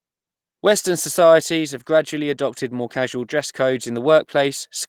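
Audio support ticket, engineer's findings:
No faults found.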